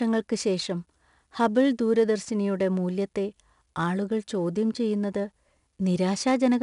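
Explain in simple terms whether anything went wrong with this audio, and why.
The speech carries 4-bit ADPCM compression from start to finish: each sample is stored as a crude step, adding gritty hiss to louder sounds and removing everything above 10.6 kHz.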